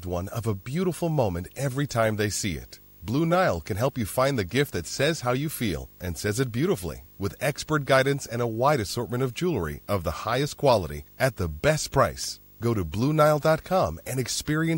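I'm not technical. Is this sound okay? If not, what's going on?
No. Running under the speech from start to finish is a video or display buzz: a screen or video cable near the recording gear is leaking its signal into the audio. You hear a steady 50 Hz buzz, set by the picture's refresh, with a fizzy hash on top and a very high whine near 15.6 kHz. That whine and hash tell it apart from ordinary mains hum, which is a smoother, plainer drone.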